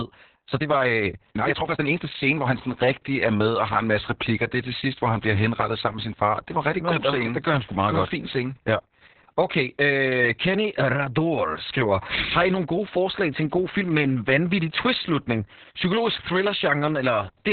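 From 0.00 to 2.56 s the speech runs fast, at about 1.46 times normal pace, while its pitch stays where it should be. At 2.56 s the pace drops abruptly to normal. This is a time-stretched section, here squeezed rather than stretched. The likely cause is software shortening this stretch to fit a length by dropping short pieces of audio, which keeps the pitch intact but makes the opening sound rushed.

Throughout the clip there is heavy Opus voice compression damage. Nothing is present above about 4.3 kHz, so the speech is narrowband and muffled. Its texture is hoarse and robotic, the result of the SILK linear-prediction coder representing the excitation very coarsely. The narrow band and the depth of the damage fit a bitrate around 6 kbps, coded in long 60 ms frames.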